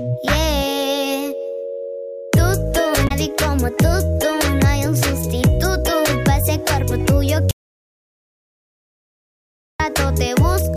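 From 3.05 to 3.11 s there is a brief glitch from damaged data in a compressed stream. Corrupted bytes made the decoder lose sync and misread frames.

At 7.51 s the audio drops out to silence until 9.80 s. The gap is silent with no room tone left, about 2.3 s lost, likely from a lost input signal.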